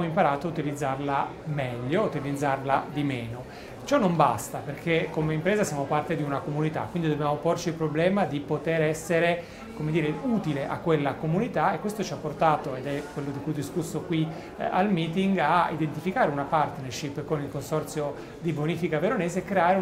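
No technical faults can be heard anywhere in the recording, and the signal holds steady throughout without any audible disturbance.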